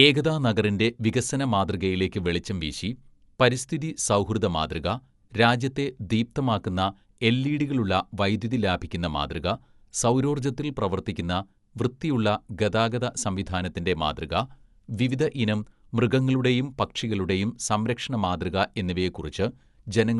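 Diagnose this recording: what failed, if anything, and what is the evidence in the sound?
The speech sounds dull and rough throughout, with nothing above 11.4 kHz and a gritty, fluttering noise around voiced tones. The likely cause at the codec stage is Dolby Digital compression, narrowing the band and filling unfunded frequency lines with dither noise, which fits a bitrate near 64 kbps.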